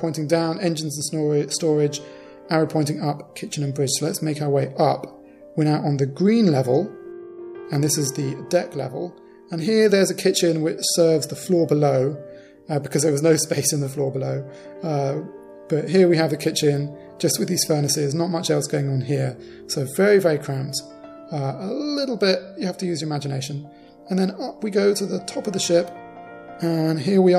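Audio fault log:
0.24–27.28 s, clock slip clicks: faint, regular ticks about five times a second, around 150 in all, each a single sample dropped or repeated. The likely cause is two unsynced clocks drifting apart by roughly 150 ppm, so a whole sample slips at that steady rate.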